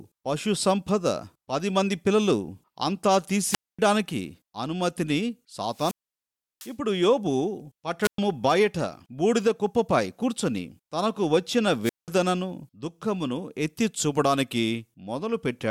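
Wireless microphone squelch dropouts occur at 3.48, 5.70, 8.02 and 11.83 s. Each time the FM link fades, hiss rises briefly, then the receiver's squelch mutes the speech for about 0.24, 0.70, 0.11 and 0.19 s respectively before the signal returns.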